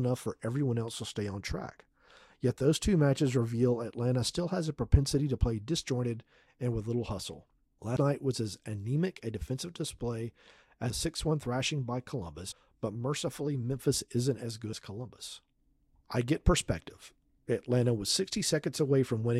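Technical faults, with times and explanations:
7.95, 10.90, 12.50 to 12.52 and 14.72 s, compressed frames skipped: the audio jumps forward without any silent gap, losing about a tenth of a second after "and with little hustle" and again after "anemic a defensive display", then roughly 150 ms at 12.5 s and about a fifth of a second after "isn't as". Whole frames never reach the output. This differs from a dropout, which leaves a hole.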